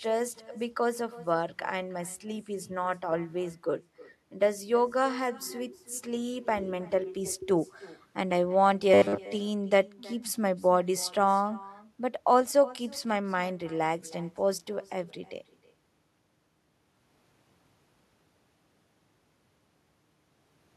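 From start to end, the speech carries an echo with no canceller. A loudspeaker at the far end feeds its microphone, and nothing removes the pickup. Each phrase returns roughly a third of a second later. The copy sits about 22 dB down, and thin.

From 8.94 to 9.28 s, the speech becomes a rigid, metallic buzz at 100 Hz. The likely cause is robotic sound from repeated short buffers. Audio arrived too seldom, so a short chunk was looped. The pitch fits a 10 ms chunk. Most of the real audio was skipped.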